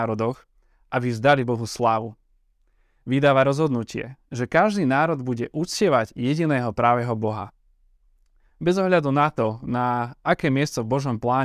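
No technical faults can be heard anywhere in this speech recording, so there is nothing to describe in time order.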